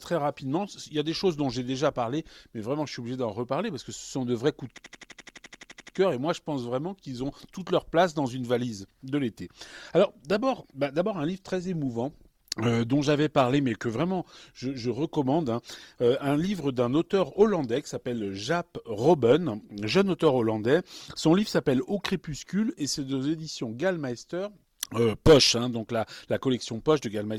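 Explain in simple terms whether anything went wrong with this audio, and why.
Two things went wrong here.

From 4.78 to 5.97 s there's a system hang loop. The computer or its audio driver froze, but the sound hardware kept replaying the last chunk it had, a slice about 85 ms long, 14 times in a row. At roughly 12 repeats per second, that comes across as a rapid machine-gun stutter rather than a smooth pause.

Then, from 10.2 to 22.2 s, the adaptive stream dropped to a lower bitrate. The connection slowed, so the player switched to a lighter, more heavily squeezed version of the stream. The audio suddenly picks up more compression artefacts, with no gap at the switch. At 22.2 s the fuller-quality version comes back.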